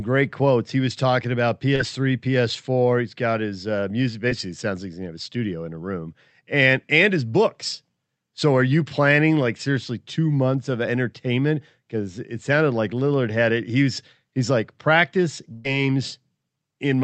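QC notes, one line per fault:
1.75–1.81 s and 4.29–4.33 s, short concealed packet loss: Brief smears in the sound, about 40 ms and 20 ms long. The receiver never got that audio in time. It filled each gap by continuing the preceding sound, then blended back in. The lengths fit two and one 20 ms packets.
15.53–15.66 s, burst of packet loss: A run of about 120 ms went missing, which fits six consecutive 20 ms packets. The receiver extended the last sound for about 116 ms, fading it rather than going silent. Audio then resumes further on.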